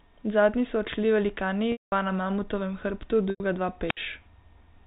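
At 1.72 s, right after "so odšli velikani", there's packet loss with pitch repetition. About 200 ms of the stream goes missing, which fits ten 20 ms packets. The receiver covers the hole by looping the last pitch period, so you hear a held, buzzy tail that fades out, then a gap before the speech cross-fades back in on "na mamutovem hrbtu". The same fault returns at 3.30 s, just after "na mamutovem hrbtu", this time a 100 ms loss. It's a shorter patch of that droning repeated cycle, fading before the audio picks up again.

Then at 3.86 s there's a wireless microphone squelch dropout. The FM radio link weakens, hiss swells briefly, and the receiver's squelch slams the output shut for about 63 ms. That leaves a small hole of near silence before the signal returns at around 3.98 s. All of this rides on a G.711 A-law telephone path, so the whole clip is capped at 4 kHz.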